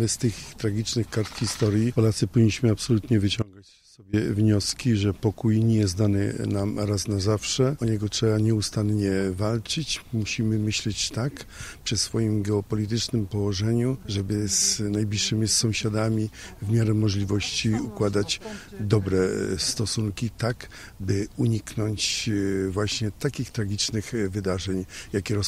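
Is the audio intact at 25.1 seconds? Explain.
Yes, at 25.1 s the audio runs on intact, with no dropout, glitch or other fault to be heard at that moment.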